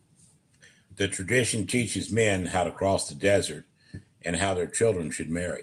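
No technical faults can be heard in this recording.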